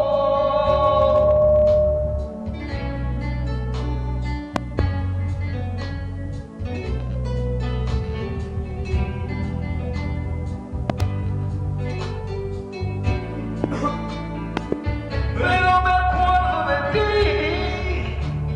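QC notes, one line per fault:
4.56–4.81 s, 10.90–11.03 s, 13.64–13.66 s, 14.57–14.75 s: loud pop. A sudden voltage step, likely from a switch, plug contact or static discharge, enters the signal path, giving sharp pops roughly 20 dB above the sound, doubled except the single one at 13.64 s, while the sound carries on underneath.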